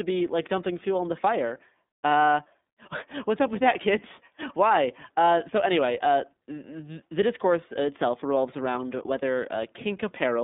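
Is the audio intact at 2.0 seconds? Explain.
No. At 2.0 seconds the speech carries iLBC codec damage, present throughout the clip. The codec encodes each 30 ms frame independently, keeping only a line band of about 200 Hz to 3.7 kHz, and the coarseness fits its 13.33 kbps mode. The speech sounds muffled and plainly rough, with a buzzy, synthetic edge. That texture is what separates it from simple telephone band-limiting, which narrows the sound without adding roughness.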